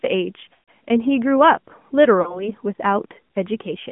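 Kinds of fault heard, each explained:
AMR narrowband mobile codec: The speech passes through a mobile codec limited to about 150 Hz to 3.4 kHz, with a plainly audible buzzy, synthetic texture that fits a mode near 10 kbps. A spectrogram shows a hard ceiling at 3.4 kHz and smeared harmonics below.
Lost AMR speech frames: The decoder masks corrupted frames by repeating the last pitch and vocal tract settings at falling gain. From 0.54 to 0.68 s, 140 ms drags out and fades, fitting seven frames. Near 2.22 to 2.50 s, a 40 ms loss dips briefly. Waveforms show decaying envelopes.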